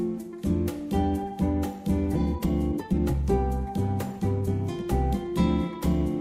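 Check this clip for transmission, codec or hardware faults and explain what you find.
Two faults are present: one skip ahead and two bursts of jitter buffer speed-up.

At 2.15 s there is a skip ahead. About a second of audio is dropped, and playback jumps forward with no gap or fill.

Jitter buffer speed-up follows from 2.19 to 3.23 s and again from 4.13 to 5.35 s. The buffer held too much audio, so short pitch-period pieces were cut repeatedly. The first stretch runs at 142% speed, losing about 0.4 s, and sounds rushed. The second runs at 105%, losing well under a tenth of a second, and is barely hurried. Pitch stays unchanged in both.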